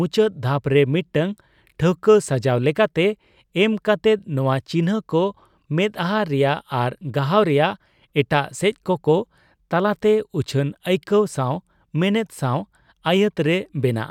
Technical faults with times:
none

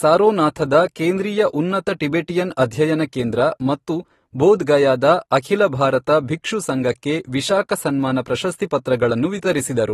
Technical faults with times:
0.00-9.93 AAC compression

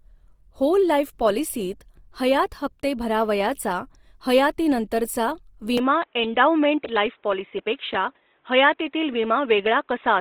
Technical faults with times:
0.00-10.21 Opus compression
5.78-10.21 input switched to a poorer device

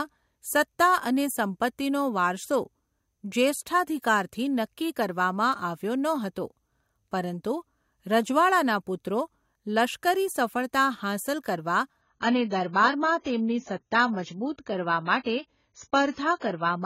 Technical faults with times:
12.01-16.86 adaptive stream at a lower bitrate

